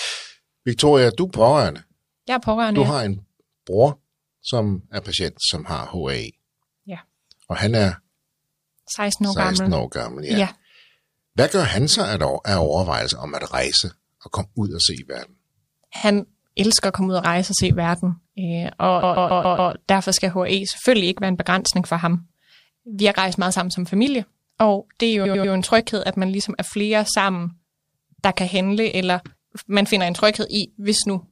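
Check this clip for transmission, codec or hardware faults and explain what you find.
Yes, repeated frames occur three times: a compressed block is replayed, producing stutters and identical repeating tiles on a spectrogram or waveform.

15.95–16.02 s, before "elsker at komme ud": a 23 ms block plays three extra times.

19.02–19.72 s, between "se verden øh og" and "derfor skal": a 139 ms block plays five extra times.

25.24–25.52 s, between "og det er jo" and "en tryghed at man": a 93 ms block plays three extra times.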